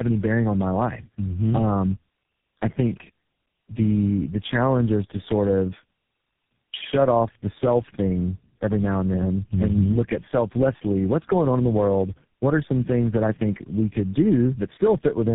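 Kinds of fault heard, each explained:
Tandem speech coding: the speech sounds rough, muffled and warbly, consistent with three low-rate speech codecs in series, each re-encoding the previous one's already degraded output, so artefacts compound. Nothing is heard above 3.8 kHz, which fits a narrowband telephone chain throughout.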